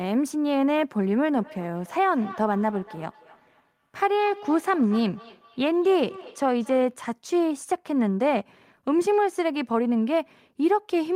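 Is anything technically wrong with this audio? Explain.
Yes. From 1.35 s to 7.0 s the speech carries a feedback echo between two devices. Each phrase returns at a regular gap of roughly a fifth of a second. The repeats sound thinner and more ringing than the original. The loudest sits about 18 dB below the speech. A second device in the same room is likely playing this call aloud. The microphone picks that playback up again. Neither echo canceller removes sound from the other device.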